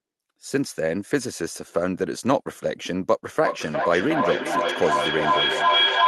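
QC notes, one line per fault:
3.44–6.07 s, feedback howl: a shrill tone around 3 kHz swells, with the loop repeating roughly every 0.4 s, peaking about 4 dB above the speech, until the clip ends. Each trip from loudspeaker back into a microphone adds gain, narrowing toward that frequency.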